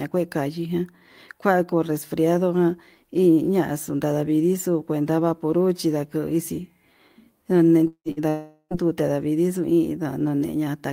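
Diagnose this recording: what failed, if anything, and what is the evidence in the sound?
Long network dropout at 7.87 to 8.08 s and again at 8.29 to 8.73 s: the speech gives way to a fading buzz or hiss, then near-silence, before resuming further on. About 180 ms and 420 ms are lost, likely from packets stalling on the network.

Burst of packet loss at 8.11 to 8.20 s, between the two dropouts: about 60 ms of speech is missing. The receiver holds the last sound and fades it, so a brief decaying buzz or hiss bridges the gap before speech resumes with that stretch gone.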